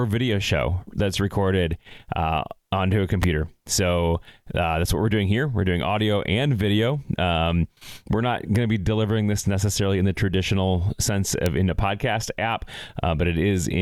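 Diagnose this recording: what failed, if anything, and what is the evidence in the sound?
Electrical switching spikes in the analogue wiring: sharp snaps at 3.23 s after "recorded uh onto a" and 11.46 s before "in a podcast app", likely from a nearby switch arcing. Each shows as a narrow waveform spike and a thin full-band vertical line on a spectrogram.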